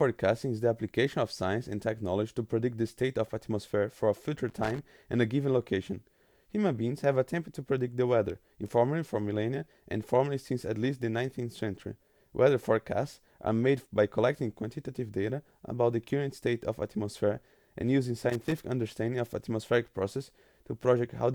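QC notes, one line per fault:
4.49–4.79 s and 18.30–18.64 s, loose connector crackle: short, irregular bursts of scratchy crackle, each about a third of a second, break into the speech. A worn or dirty contact is making and breaking as it shifts, chopping the signal into rough fragments.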